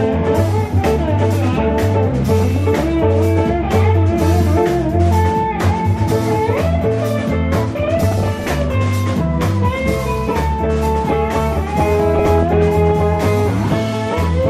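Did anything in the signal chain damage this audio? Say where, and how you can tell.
Yes. At the codec stage, the plainly audible dull, gurgling, granular sound likely comes from MP2 compression at a low rate, around 80 kbps, where starved upper sub-bands flicker off.

In transmission, DAB burbling appears at 2.42–2.74 s, 7.77–8.62 s and 12.19–12.69 s. Bit errors that slip past error correction corrupt sub-band data, causing short blips of noise in single sub-bands.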